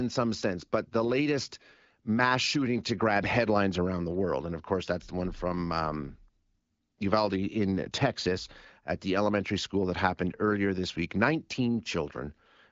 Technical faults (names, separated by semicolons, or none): none